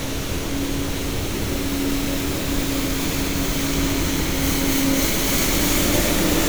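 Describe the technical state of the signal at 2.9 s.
At 2.9 s the signal is intact, with no audible technical fault at that point in the sound.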